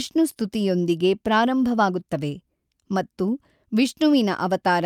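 No technical faults can be heard anywhere in this speech recording. There are no events to place on the timeline.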